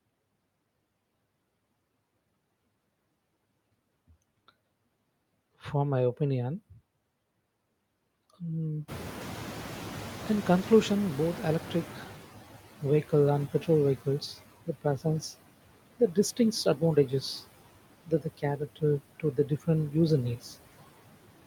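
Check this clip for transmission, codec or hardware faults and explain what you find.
The faults come from the noise suppressor rather than the transmission path or hardware, and there are three kinds.

Noise suppressor artifacts run through the whole clip. The suppressor pulls down bands it judges to be steady noise by about 18 dB, frame by frame, so the background sinks in pauses and swells under the speech.

The noise suppressor is catching up from 8.88 to 12.57 s. The room noise rises by about 18 dB near 9 s, and the suppressor's noise estimate lags it by 3.69 s. The louder noise first comes through with only about 12 dB of reduction, then sinks as the estimate adapts, settling before "vehicle and petrol vehicles".

Speech is cut by the noise suppressor at 14.66 to 15.05 s (right after "vehicle and petrol vehicles"), 16.65 to 17.12 s, 18.06 to 18.83 s and 19.2 to 19.68 s. Parts of the speech were misjudged as noise and turned down by up to about 17, 10, 15 and 13 dB. 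Each cut lasts a tenth to a few tenths of a second and leaves sounds swallowed or faint.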